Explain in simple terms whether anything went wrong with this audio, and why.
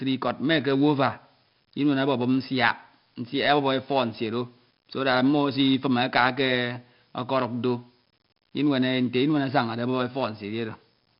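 The speech was squeezed with 4-bit ADPCM compression from start to finish, storing rough steps, so a gritty hiss rides every loud syllable and nothing sounds brighter than about 5.3 kHz.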